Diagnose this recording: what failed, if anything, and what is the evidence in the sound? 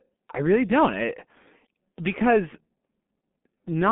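The codec stage failed: the speech has gone through G.723.1 compression, and the damage is heavy and runs through the whole clip. The sound is muffled, hoarse and rough, with consonants smeared together. A spectrogram would show a hard ceiling with nothing above 3.7 kHz, a weak low end below 200 Hz, and formant transitions stepping in coarse 30 ms blocks. That fits a very low bitrate near 6 kbit/s, where the voice model updates too slowly to track fast articulation.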